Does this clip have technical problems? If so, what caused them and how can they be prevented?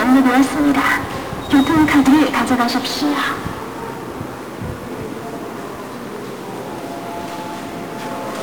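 Yes. The whole clip carries heavy 1-bit DFPWM compression damage. The sound is fuzzy and crackly from start to finish, and the treble is dulled or replaced by hiss. DFPWM keeps only one bit per sample, and each bit just nudges an adaptive level up or down. That coarse tracking leaves strong broadband quantisation noise over everything. The noise density fits a rate of about 48 kbps. To prevent it, store or send the audio with a multi-bit PCM format or a modern perceptual codec instead of DFPWM.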